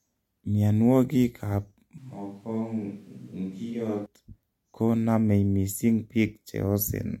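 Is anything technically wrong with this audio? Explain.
Yes, there is one fault. From 1.98 to 4.06 s the speech turns suddenly hollow and roomy, about 10 dB quieter, with thinner bass and faint room noise. This is likely a switch to a distant microphone.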